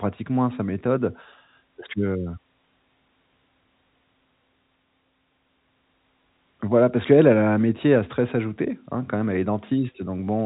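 Speech carried over a G.711 A-law telephone path at 64 kbps, with nothing passing above 3.8 kHz, shows no technical faults.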